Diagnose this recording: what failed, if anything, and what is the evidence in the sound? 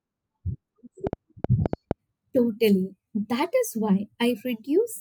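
A train of clicks runs from 1.07 to 1.92 s, about seven sharp, similar-shaped ticks at roughly 5.9 per second with uneven spacing, peaking about 15 dB above the speech. The likely stage is the analogue wiring or interface, with nearby equipment or a struggling connection injecting repeated pulses. On a waveform they show as narrow spikes standing well clear of the speech envelope. On a spectrogram they appear as thin vertical broadband lines at irregular intervals.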